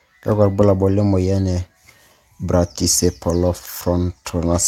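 No audible faults detected.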